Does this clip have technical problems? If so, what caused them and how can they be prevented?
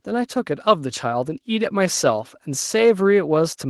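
Yes. At 1.65 s the microphone volume is stepped up: the call software judged the input too quiet and raised the device gain in one step, about 4 dB. Voice and background noise jump together, unlike a talker moving closer, which lifts only the voice. Turning off automatic microphone gain adjustment in the call software prevents it.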